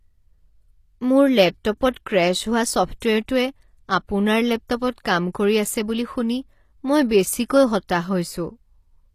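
HE-AAC compression, likely, runs throughout: the treble above the coded band sounds rebuilt rather than recorded, gritty and metallic on s sounds, with nothing at all above 14.9 kHz. Copied-up harmonics misalign at the crossover, and the plainly audible damage suggests a low bitrate near 24 kbps.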